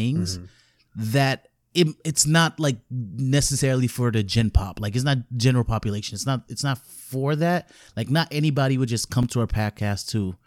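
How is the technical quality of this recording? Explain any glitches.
One glitch: a block of digital silence at 9.23 s, between "not anybody would just" and "to our". About 5.8 ms of speech drops to silence, which fits a 256-sample buffer left unfilled in time. Because the signal jumps to silence and back without any fade, the short hole is heard as a tick rather than as silence. Unlike a dropout concealed by smoothing, nothing is filled in or faded.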